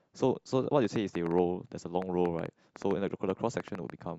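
A train of clicks runs from 0.85 s to 3.91 s: about twenty short pulses of much the same shape, arriving at an uneven pace averaging roughly 5.6 per second and peaking about 10 dB above the speech. They are heard as a scattered ticking laid over the talker and through the pauses alike. The cause is likely interference from nearby equipment or a faulty connection or power supply injecting repeated pulses into the signal path.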